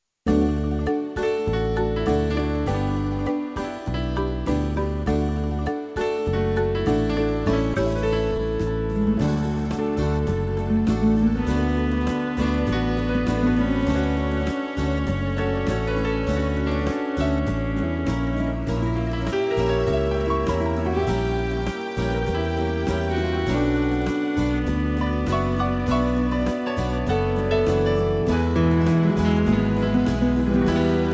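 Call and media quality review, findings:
Skip ahead at 7.74 s: audio jumps forward, about 0.7 s missing, joined with no gap. Audio dropped in transit or by jitter buffer on overflow, cutting delay. Waveform shows an abrupt splice; spectrogram shows a hard vertical discontinuity in harmonic tracks.

Jitter buffer speed-up, 9.08–9.97 s: audio hurried at unchanged pitch, running at 113%. Buffer over target; receiver trimmed pitch-period pieces repeatedly, roughly 150 ms total. Spectrogram shows compressed timing with steady harmonic spacing; waveform shows fewer periodic cycles, no gaps. G.722 path band-limited to 8 kHz throughout.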